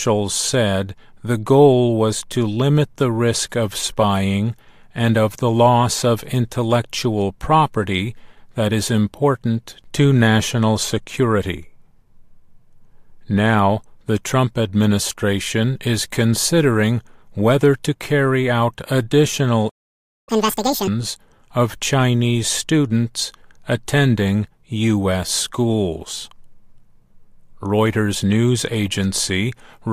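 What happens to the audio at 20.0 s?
A playback stall runs from 19.68 to 20.29 s: the sound stops mid-flow and the output falls silent for about 0.59 s before resuming. The likely cause is the player running out of buffered data, or its playback thread being blocked, until it recovered.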